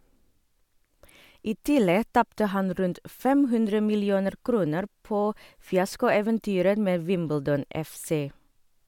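No technical faults are audible.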